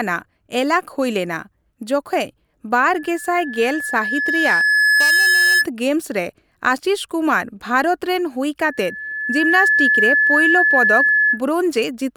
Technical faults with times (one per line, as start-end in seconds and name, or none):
2.95-5.66 loudspeaker feedback squeal
8.59-11.42 loudspeaker feedback squeal